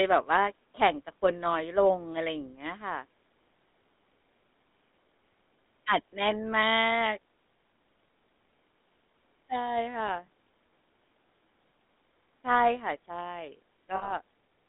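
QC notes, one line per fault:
throughout: GSM full-rate codec. The speech sounds buzzy and gravelly, confined to 200 Hz–3.7 kHz. Coarse pulse excitation, which fits a 13 kbps stream, causes this.
6.10–6.13 s, 10.26–10.28 s, 13.96–14.13 s: lost GSM frames. Gaps of 20, 20 and 60 ms are filled by repeating the last good frame. This causes a brief rough, metallic ring.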